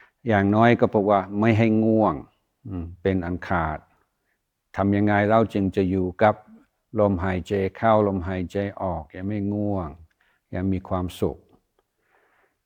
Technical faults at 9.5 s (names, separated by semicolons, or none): none